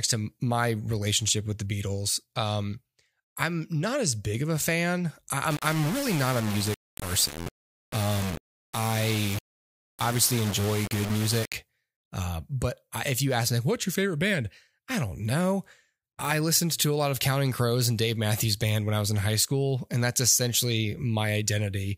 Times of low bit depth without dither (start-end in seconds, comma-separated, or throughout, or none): 5.51-11.54